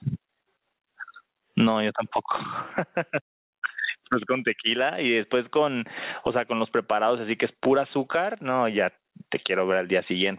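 Speech carried over a narrowband call path, with nothing above 4 kHz, which fits a G.711 connection. Gain pumping runs throughout, with the gain swinging by around 25 dB, likely from excessive input gain driving a fast limiter.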